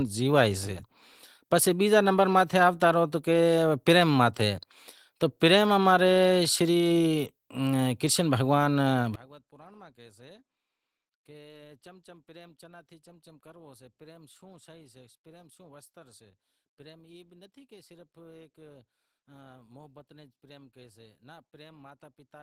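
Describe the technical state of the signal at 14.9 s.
At 14.9 s the speech is faint, about 28 dB quieter, from 9.15 s to the end: one channel inverted likely, cancelling the shared centre when summed to mono.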